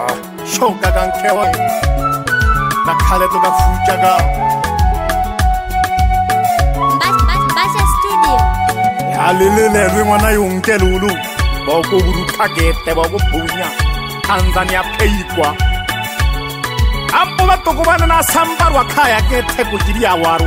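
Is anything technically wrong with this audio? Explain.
Yes, there are two faults. At 1.43 s the audio lurches forward: a piece of the sound, about a fifth of a second, simply vanishes, and the material on either side is butted together with no silence or fill between them. This is a skip ahead. Later audio was already queued, so a stretch was discarded, either lost in transit or dropped by an overfull jitter buffer. The playback delay shrank by roughly the same amount.

Shortly afterwards, from 2.05 to 2.95 s, the sound runs slightly fast, at about 104% of normal speed, with its pitch unchanged. This is a jitter buffer speed-up. The buffer was holding more audio than its target, so the receiver repeatedly trimmed out tiny slices only a pitch period or a few long, removing a few tens of milliseconds in total to bring the delay back down.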